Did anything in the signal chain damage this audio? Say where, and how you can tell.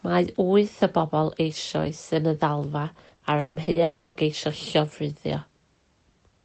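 Yes. Network stage: repeated packet loss (robotic sound) from 3.07 to 3.78 s. Five gaps, the longest 160 ms, are patched by concealment, leaving choppy speech with pieces missing. A spectrogram shows smeared, repeated harmonic blocks.

From 3.83 to 4.18 s the sound turns into a continued buzz that never falls silent, likely a long network dropout. The waveform shows a fading, repetitive envelope in place of real speech.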